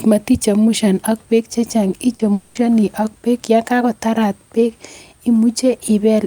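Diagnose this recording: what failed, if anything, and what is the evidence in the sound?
Network stage: short concealed packet loss at 2.15 to 2.21 s. About 40 ms was synthesised from the preceding sound, leaving a brief smear before real audio resumes.

From 2.33 to 2.57 s, about 220 ms is replaced by a fading synthetic continuation of earlier sound, likely a long network dropout the receiver concealed.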